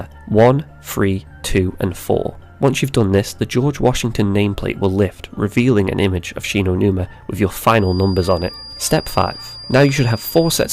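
From 7.75 s to the end of the clip, a feedback whistle sits behind the sound: a thin, steady tone at 4.8 kHz, roughly 20 dB below the main signal, swelling and fading slowly in level. The likely cause is a loudspeaker-to-microphone loop held just at the edge of feedback, sustaining one frequency without running away. On a spectrogram it appears as a narrow horizontal line at 4.8 kHz starting at 7.75 s. The waveform barely shows it.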